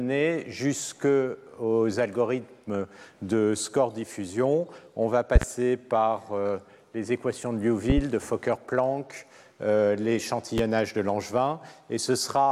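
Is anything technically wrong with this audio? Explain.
Yes, there's a loud pop problem. Around 5.36 to 5.45 s you get a quick double pop, roughly 20 dB above the sound. Another double lands at 7.90 to 8.01 s, and a single one at 10.58 s, both about 15 dB up. The likely cause is a voltage spike from a switch, connector, static or driver glitch riding on the signal, with the downstream circuitry shaping it into a sharp thump. The audio keeps going underneath each one.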